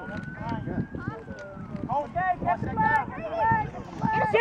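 No technical faults can be heard anywhere in this clip.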